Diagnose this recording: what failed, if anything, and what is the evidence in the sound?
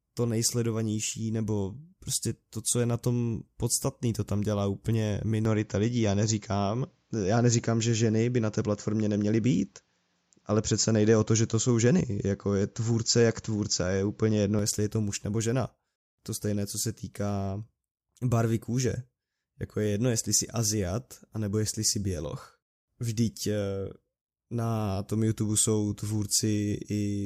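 The input driver likely switched to a poorer device from 5.45 to 14.59 s, after "to tam dělá úplně". The speech turns dull, with nothing above 7.6 kHz.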